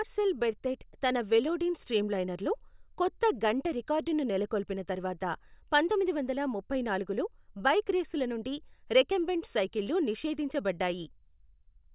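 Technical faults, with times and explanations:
No technical faults are audible anywhere in this speech.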